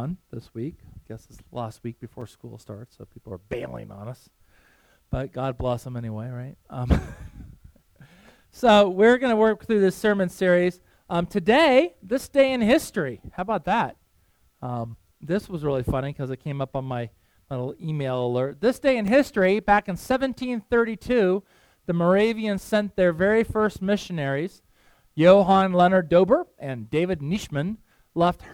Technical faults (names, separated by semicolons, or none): block of digital silence